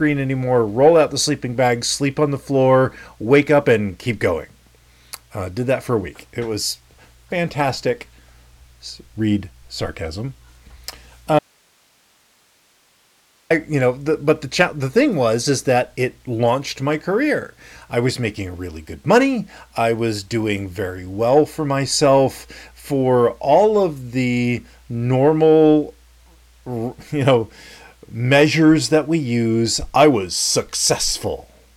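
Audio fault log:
11.39–13.50 s, audio dropout to a faint residue: the speech cuts out abruptly mid-flow for about 2.1 s and returns just as suddenly, with no fade at either edge. The gap is not silent but holds only hiss, roughly 40 dB below the speech level. The likely cause is the wanted signal being lost upstream while the path after the break stayed live, so its own noise floor carried through the gap.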